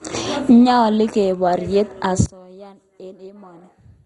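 From the start, the speech sounds dull and granular. Nothing is present above 11.2 kHz. The remaining upper range flickers in and out, with a gurgling edge. This is heavy MP2 compression as the likely cause, and the damage fits a bitrate around 56 kbps. MPEG Layer II divides the spectrum into 32 sub-bands and shares out bits. At this starved rate, the top bands get none and drop out. The survivors are coarsely quantised.

At 2.26 s the level falls by about 22 dB and stays down to the end at 4.06 s. What remains is a faint trace of the speech. The likely cause is one channel inverted. With one stereo side in reversed polarity, the centred speech common to both channels cancels when summed to mono. Only the small difference between the channels survives.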